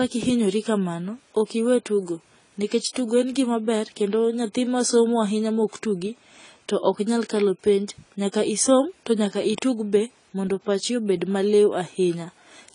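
From start to finish the speech sits under AAC compression, and the damage is plainly audible. Nothing comes through above about 10 kHz, so it sounds dull, and sibilants pick up a fizzy, warbling smear. That fits a low bitrate around 24 kbps, likely AAC-LC starving the high bands.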